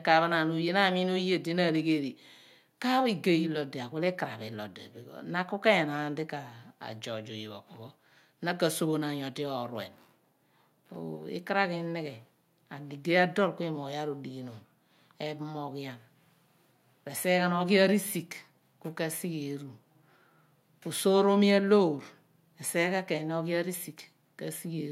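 A speech recording with no audible technical fault at any point, its signal holding steady and intact throughout.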